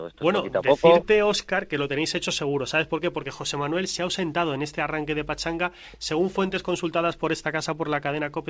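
No technical fault can be heard in this audio. It has passed through a WebRTC call path working as intended, and its content stops at 8 kHz, which fits a wideband codec such as G.722.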